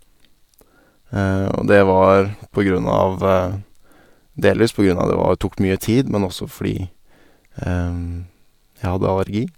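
No technical faults are audible.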